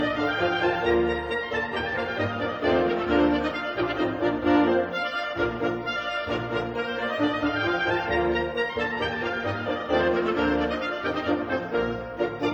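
No technical faults are audible.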